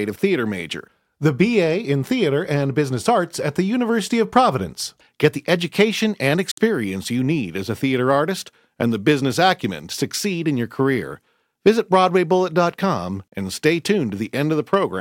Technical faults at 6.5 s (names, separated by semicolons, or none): Bluetooth dropout